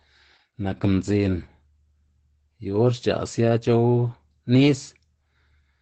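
Right from the start and all the way through, the speech carries Opus voice compression damage, and it's plainly audible. Nothing gets through above about 8.6 kHz, so the top end is just gone and everything sounds muffled. The coarse excitation coding in the SILK linear-prediction coder gives the speech a hoarse, slightly robotic edge. The character fits wideband SILK at around 12 kbps with 20 ms frames.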